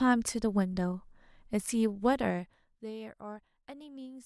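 From 2.05 to 2.90 s a fine ticking rides on the speech as its level drops by around 20 dB. This is zipper noise: the gain falls in unsmoothed 2 dB jumps, roughly ten a second, and each jump leaves a small click.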